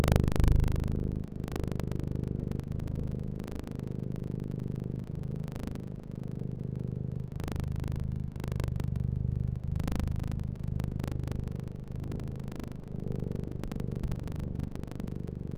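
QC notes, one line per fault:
Throughout, buffer tearing: a steady robotic rattle at 25 Hz rides on the sound whenever signal is present. Writer and reader of the ring buffer have slipped, so about a tenth of each roughly 40 ms period replays audio from around 70 ms earlier, hard-spliced on both sides.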